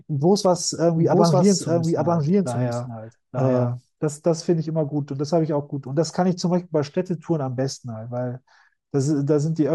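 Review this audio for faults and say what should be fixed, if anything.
From 0.96 to 3.74 s the speech is heard twice over: a full-band second copy trails about a second behind at roughly the same level, dry and without any decay, starting and stopping abruptly. This doubled audio track likely comes from a second, slower capture path. Make sure only one capture route feeds the mix.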